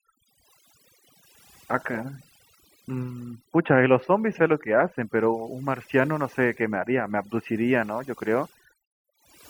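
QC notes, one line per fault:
Throughout: overdone noise removal. Aggressive denoising gates frequency bands near the noise estimate, leaving near-silent gaps with twinkling specks.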